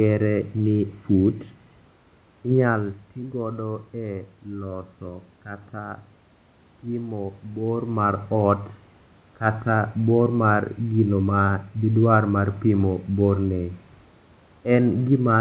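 The speech comes through what sounds like a G.711 mu-law call path, with that codec's fine coding noise and nothing above 4 kHz, over a bed of room noise, and the level shifts around 2.5 s and 7.5 s come from the talker moving relative to the microphone rather than from anything in the signal chain.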